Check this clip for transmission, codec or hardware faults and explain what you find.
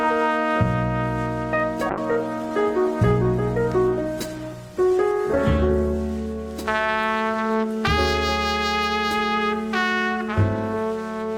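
There's one fault, a call bitrate drop from 1.91 to 6.07 s: bandwidth collapsed, so the encoder coded coarsely, sounding muffled and watery, which fits roughly 128 falling to 18 kbps.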